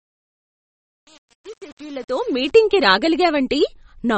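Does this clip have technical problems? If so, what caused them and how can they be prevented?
Yes. Throughout, the speech sounds plainly watery and swirly, with nothing above 8.3 kHz, likely MP3 compression at a low bitrate around 33 kbps. Encode at a higher bitrate or keep a lossless copy.

From 0.0 to 2.51 s there's truncation distortion on a fade: the quiet part turns gritty because the fade kept too few bits, roughly 7, and added no dither. Apply dither whenever a fade or gain change drops the bit depth.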